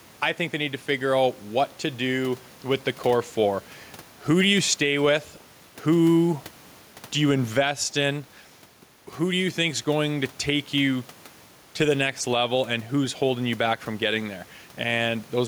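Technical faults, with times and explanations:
Throughout, gain pumping: the gain swings by around 5 dB, pulled down under each loud syllable, squashing level differences, with room noise sitting about 31 dB below the speech. The likely cause is input gain set too high, with a fast limiter pulling it down on every peak.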